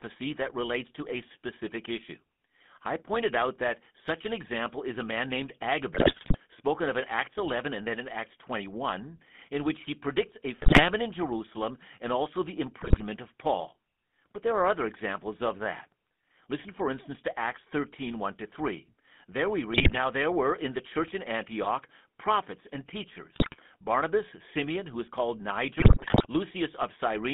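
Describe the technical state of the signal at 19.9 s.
GSM bit errors occur from 19.73 to 19.97 s. Corrupted filter, pitch and gain values twist the spectrum and level frame by frame, causing squawks, pops and gargling. Underneath, the GSM full-rate codec's pulse-driven vocal-tract model gives the speech a buzzy, gravelly roughness, confined to roughly 200 Hz to 3.5 kHz.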